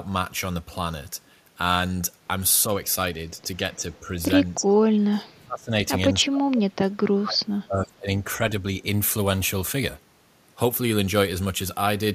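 Speech suppressed in double talk: small dips at 3.76, 4.01 and 4.55 s, then deep fades from 4.98 to 5.87 s and 6.13 to 8.41 s, likely from an echo canceller ducking the talker during overlap. Unlike clean packet-loss dropouts, the level pumps and sinks unevenly.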